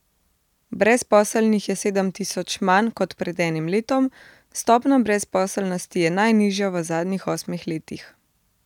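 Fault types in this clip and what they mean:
Nothing stood out on listening to the speech in this recording.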